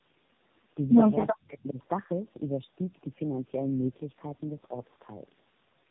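Throughout the clip, the speech passed through tandem speech coding: it was decoded and re-encoded at each link boundary, with three separate low-rate speech coders working one after another. Each coder had to model the artefacts left by the previous one, so the errors stacked. The result is rough, muffled and warbly speech, with nothing above 3.8 kHz. That sound fits a chain like G.729A followed by two AMR-NB stages.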